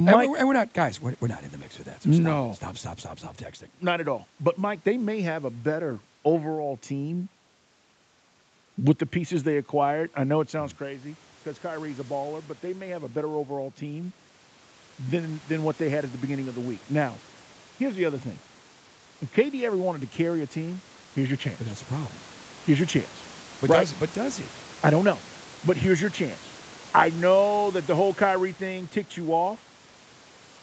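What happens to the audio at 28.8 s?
At 28.8 s the level is sinking under automatic gain falling. It runs from 27.19 to 29.08 s, just after "here's your chance I". The gain control judged the input too loud, or its background noise too strong, and eased its gain down by about 6 dB. Speech and background drop together.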